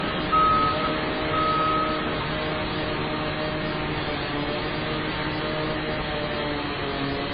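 Right from the start and all the way through, there's a steady buzz at about 93.8 Hz riding on the sound, a fine regular ticking that swells and fades with the level of the audio. That's the classic signature of a filter restarted on every block. The filter drops its memory at each block boundary and starts again from silence, so every block opens with a tiny transient. The rate fits a 512-sample buffer.

Also present for the whole clip, the audio is dull, with nothing above 5 kHz, and it carries a mix of different compression artefacts layered on top of each other rather than one consistent codec character. That points to transcoding between lossy codecs, likely a very low-bitrate MP3 passed through something like Vorbis and then AAC-LC. Each later encoder spends bits on the earlier damage and adds its own, while the lowest cut-off in the chain sticks.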